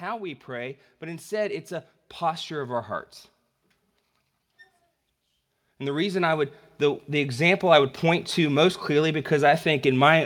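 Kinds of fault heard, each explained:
Automatic gain rising: the level control judged the input too quiet and turned itself up step by step, so the speech and the background noise swell together rather than the talker simply getting louder. Here it climbs by about 4 dB from 0.46 to 1.61 s and again from 2.19 to 2.96 s, then by about 7 dB from 5.79 to 7.94 s, just before "point to most clearly". The shared rise of the noise floor is what separates it from natural vocal emphasis.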